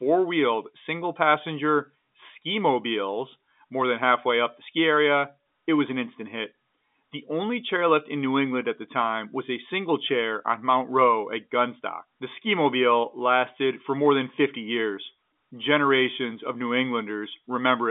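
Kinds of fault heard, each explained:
No faults heard; the speech sits in an ordinary telephone band of roughly 200 Hz to 3.6 kHz, with nothing above 3.8 kHz.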